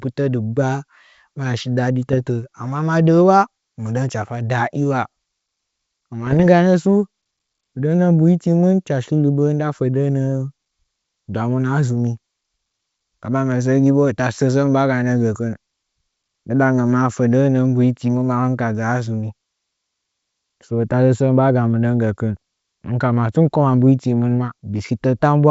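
Just after "maya shi dade", from 2.12 to 2.16 s, and again from 6.27 to 6.41 s, the speech breaks into pops and rough, gritty bursts with brief jumps in level. These are bit errors on an ADPCM link. Each flipped bit knocks the decoder's step size and predictor off track, so the damage rings on for a few milliseconds before it settles. Unlike a packet-loss dropout, the sound never goes silent or repeats. It turns harsh and lurches in loudness instead.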